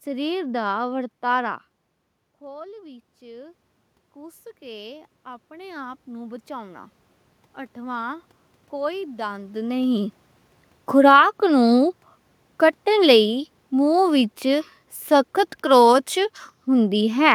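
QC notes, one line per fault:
2.41 to 7.0 s, automatic gain rising: the input level dropped by about 17 dB after the talker moved back from the microphone around 1.5 s, so the automatic gain control judged the signal too quiet and gradually raised its gain by about 10 dB over nearly five seconds. The voice swells back up slowly, and the room noise swells with it, so the background climbs along with the speech.
12.87 to 16.07 s, automatic gain falling: the talker moved again around 9.5 s; later the automatic gain control judged the input too loud, or its background noise too strong, and lowered its gain by about 3 dB over roughly three seconds. The speech starts this stretch louder, then sinks gradually. The room noise drops at the same rate, so the whole sound recedes together.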